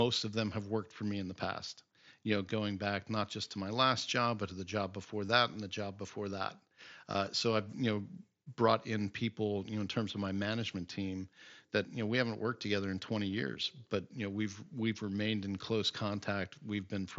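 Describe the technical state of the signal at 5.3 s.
Between "to the job before" and "and the job before", 5.26 to 5.29 s carries concealed Bluetooth headset packet loss: about 22 ms, which fits three lost mSBC frames, patched by repeating the best-matching recent waveform. Unlike a dropout's silent gap, it holds a brief buzzy tone, then warbles slightly as real audio resumes.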